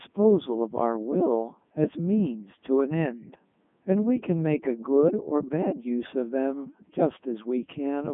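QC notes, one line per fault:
throughout, Codec 2 vocoder: speech rebuilt from pitch, voicing and spectral envelope at 3.2 kbit/s, sine-wave synthesis makes it robotic and buzzy, narrowband 150 Hz–3.5 kHz, nothing above 3.8 kHz.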